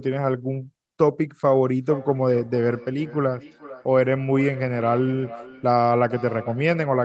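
Feedback echo between two devices begins at 1.77 s and runs to the end of the clip. Two devices in the same room are on one call: one plays back what the other's microphone sent, and that microphone hears it again. Each echo canceller only removes its own device's output, so the speech returns after roughly half a second, thinner and ringing, at its loudest about 17 dB below the direct speech.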